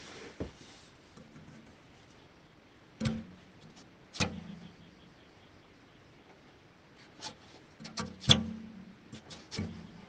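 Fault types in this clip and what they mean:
Skip ahead: At 1.97 s playback jumps abruptly forward with no filler inserted. Roughly a second of audio never plays, having been lost in transit or discarded when the jitter buffer overflowed while later audio was already queued. The sound on either side of the cut is spliced almost directly together, so the listener hears a sudden discontinuity rather than a gap of silence, and the missing stretch is simply absent from the timeline.
Jitter buffer speed-up: From 2.07 s to 3.98 s the audio runs at about 117% of normal speed while its pitch stays unchanged. The buffer was holding more audio than its target delay, which fits a burst of late packets arriving together, so the receiver repeatedly trimmed short pieces one or a few pitch periods long. Around a third of a second is removed in total, and the passage sounds noticeably hurried.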